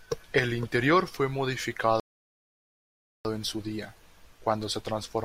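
A rebuffering stall runs from 2.00 s to 3.25 s in this speech. The player used up the audio it had already downloaded and had to halt until more data arrived, so the sound drops into silence for about 1.25 s. When playback restarts, it picks up at exactly the point where it broke off, with "en su día" following the gap. Nothing is skipped, but the pause adds that much time to the clip.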